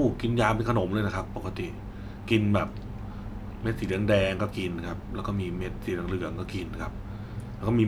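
Speech recording with no technical faults to report.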